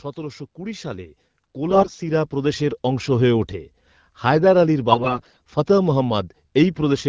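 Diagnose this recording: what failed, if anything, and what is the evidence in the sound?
Automatic gain rising runs from 0.14 s to 3.39 s, a call-processing fault. The speech and the background noise beneath it swell together by about 11 dB over those three seconds. That points to the automatic gain control judging the input too quiet and slowly raising its gain, so everything in the signal path rises at once and the noise floor climbs with the speech.

AMR bit errors occur from 1.70 s to 1.99 s and again from 4.92 s to 5.40 s, a network fault on a weak radio link. In both spans the speech keeps roughly its pitch and loudness but turns hoarse, scratchy and gargly. The first burst had an error rate near a third of the less protected bits, against about a fifth in the second. Those bits arrived flipped while the checksum on the critical bits still passed, so the decoder placed excitation pulses wrongly and used corrupted fine pitch, gain and spectral values. 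Outside these spans the AMR-WB HD Voice coding at 12.65 kbit/s sounds clear.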